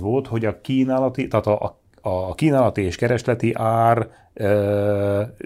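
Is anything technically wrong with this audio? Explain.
Yes. At 3.20 s, right after "a kínálati és", the speech jumps forward a tiny amount with no gap. This is likely a dropped buffer (overrun): the samples weren't read before the hardware overwrote them, so a very short stretch, roughly a millisecond or two, vanished and the two edges were butted together. Unlike a dropout, no silence fills the hole; the waveform simply skips ahead.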